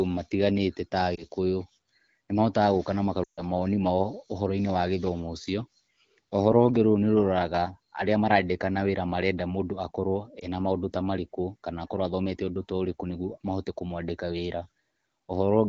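At 1.15 to 1.24 s the speech briefly dips and warbles, and again at 10.39 to 10.47 s, just before "maũndũ ta". At 3.24 to 3.42 s, right after "gũka na", the sound drops to near silence before returning weak or rough. These are lost AMR speech frames. Corrupted frames failed their checks, so the AMR-WB decoder (clear, at a quality consistent with 12.65 kbit/s) repeated its last good settings at falling gain. The short glitches fit one lost 20 ms frame, and the longer fade fits roughly seven.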